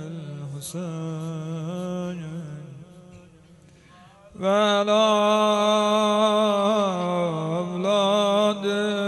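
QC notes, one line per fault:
No faults heard anywhere in this clip.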